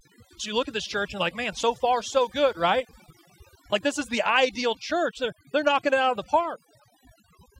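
A speech clip with overdone noise removal running throughout. A noise reduction stage was pushed too hard, so any frequency band sitting near its noise estimate gets pulled far down or shut off, taking the quieter parts of the voice with it. The pauses fall to near silence dotted with twinkling specks. On a spectrogram, the gaps show as dark areas sprinkled with isolated bright dots, and the speech looks patchy and full of holes.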